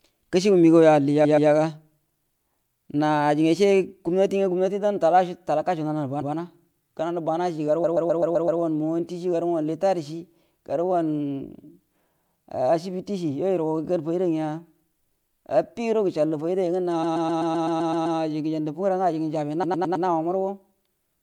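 At 1.24, 6.21, 7.83, 17.02 and 19.63 s the speech stutters with repeated frames. A 128 ms chunk (107 ms at the last) loops one to nine extra times, stretching the audio by the looped time. That fits a short run of frames being sent again.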